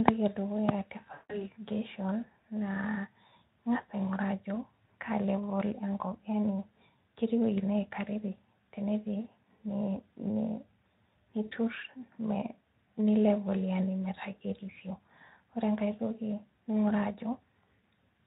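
Speech carried over a Speex link, with two dropouts handled by VoIP packet loss concealment in the speech codec. From 1.13 to 1.50 s, and briefly from 11.47 to 11.53 s, the decoder extrapolates its last pitch and filter into a buzzy tone or coloured noise that fades. These gaps fit roughly 160 ms and 40 ms of lost audio.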